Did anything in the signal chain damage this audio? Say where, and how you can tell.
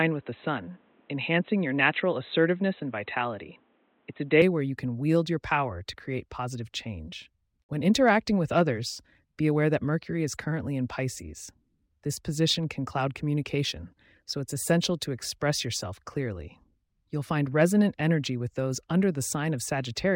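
Yes. For the first 4.42 s the audio most likely came through an input switched to a poorer device at the driver and routing stage, such as a headset's call profile. Nothing above 4 kHz survives, so the speech sounds boxy and dull. At 4.42 s, just before "where you can wield", the full band returns with no gap and no clear jump in level. The narrow section carries its own faint noise, roughly 40 dB down.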